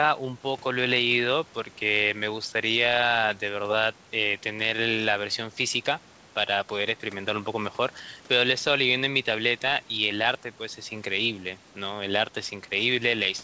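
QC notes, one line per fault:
No faults heard in this wideband call audio.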